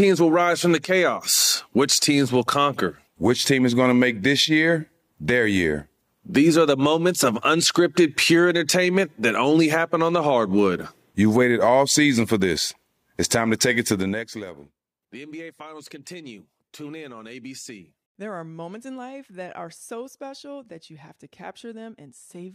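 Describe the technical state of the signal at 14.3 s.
At 14.3 s a fast ticking, zip-like texture rides on the speech as its level falls. This is zipper noise, running from 13.90 to 14.56 s: a drop of around 20 dB taken in unsmoothed 2 dB steps, about twenty per second, each step clicking.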